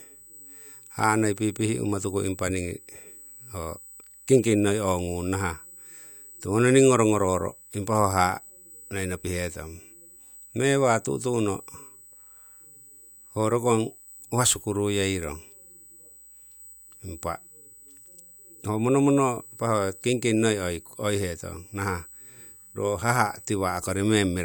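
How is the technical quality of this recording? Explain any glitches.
The recording carries a constant high-pitched whine from start to finish, a USB whine sitting under the speech. It is a steady, fixed-pitch tone at 8 kHz, with its strongest component at the harmonic 16 kHz, roughly 25 dB below the speech. The pitch points to the USB bus's 125-microsecond microframes: current drawn in those regular bursts leaks into the audio path through power or ground, imprinting that repetition rate as a tone.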